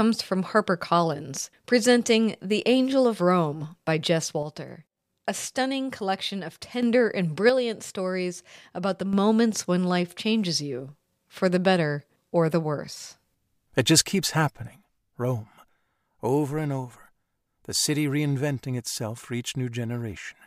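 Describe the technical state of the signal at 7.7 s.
At 7.7 s the speech sits inside a channel dropout that runs from 7.50 to 9.13 s. The level falls abruptly by about 6 dB at the start and recovers at the end. The likely cause is one stereo channel going silent while the other continues. Once the two channels are summed to mono, material common to both is left at half amplitude. Anything carried only in the lost channel vanishes for the span.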